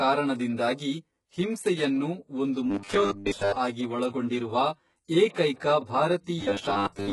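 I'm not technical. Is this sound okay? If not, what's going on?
No, it has several problems.

The first is channel delay (comb filtering). Two copies of the sound were mixed together, one about 10 ms behind the other. Where they meet, some frequencies cancel out. The gaps start near 40 Hz and repeat at even steps up the range. This runs through the whole clip. It gives the voice a hollow, phasey colour, as if it were heard through a tube.

The second is HE-AAC compression, which is the likely cause of the damage to the top end. Only the lower part of the sound is stored properly. The high part is rebuilt from copies of the lower part. That rebuilt treble does not match the real voice. Nothing is left above about 11.5 kHz. The damage is heavy, and s sounds come out gritty, metallic or lispy.

The third is robotic sound from repeated short buffers. It happens from 2.70 to 3.56 s, and again from 6.41 s to the end. 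The likely cause is that new audio arrived too slowly. The player kept repeating the last tiny slice, about 10 ms long, and skipped most of the real sound. That creates a stiff, metallic buzz at 100 Hz. The buzz can swamp the voice and make it hard to follow.

The fourth is pre-echo, at 3.25 s. Just before a sudden sound, a short hiss appears, about 16 ms long. The encoder spreads its noise across a whole block of audio, so the quiet moment before the attack gets filled too. The attack itself sounds soft or smeared.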